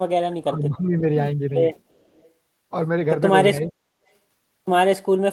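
Speech, with two echo-canceller faults. From 0.22 to 1.02 s and again from 3.6 to 3.78 s the voice sinks, by about 15 dB and then about 30 dB at the deepest. This is likely speech suppressed in double talk. Between 1.79 and 2.3 s a faint copy follows the voice 344 ms later, far below the speech level. This is a likely echo leak, told apart from room reverberation by its single fixed delay instead of a smooth decay.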